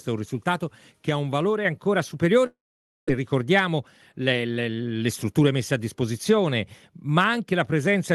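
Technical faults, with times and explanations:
1.65 s, microphone volume stepped up: sound and background jump together by about 4 dB in one step, as the call software raised the input gain.
2.46–3.10 s, long network dropout: sound smears into a fading buzz, then about half a second of near silence, resuming with roughly 0.5 s missing, likely lost packets concealed.
3.17–4.51 s, jitter buffer speed-up: sound runs about 5% faster at unchanged pitch, as the receiver trimmed around 70 ms of short pitch-period pieces to reduce accumulated delay.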